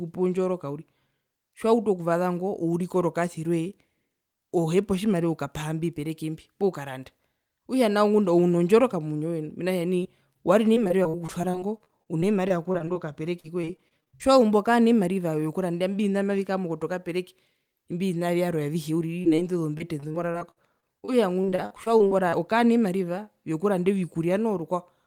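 Short concealed packet loss hits the speech at 10.03–10.07 s and 10.33–10.37 s. About 20 ms of audio failed to arrive, and the receiver patched each hole by extending the preceding sound. The result is a brief smear or wobble. A spectrogram shows smoothed, slightly repeated harmonics or a faint noise patch, with no hard gap in the waveform.

Repeated packet loss (robotic sound) follows at 10.75–13.06 s and 13.40–14.41 s. Holes of up to 40 ms recur every fraction of a second, and each one is papered over before the next arrives. The speech turns choppy, with pieces missing. The spectrogram shows striped, frozen harmonic stretches breaking up the normal formant movement.

The same short glitch returns at 19.22–19.26 s and 19.36–19.40 s. Another robotic stretch runs from 19.78 to 22.34 s, where the longest patched gap reaches about 53 ms.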